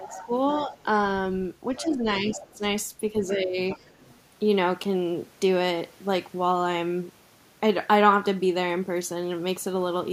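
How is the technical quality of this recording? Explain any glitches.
The recording has two related echo-canceller problems in its first four seconds, both arising when the far end of the call is talking.

Speech suppressed in double talk, at 0.0 to 0.31 s, 1.82 to 2.63 s and 3.36 to 3.58 s: the voice sinks by roughly 15 dB and sounds dulled or broken. The likely cause is the canceller mistaking simultaneous talk for echo and attenuating everything.

The other side's voice leaking through, at 0.04 to 0.85 s, 1.74 to 2.57 s and 3.7 to 4.14 s: a faint second voice, roughly 20 dB below the talker, sits underneath. It is likely loudspeaker playback that the canceller failed to fully subtract from the microphone signal.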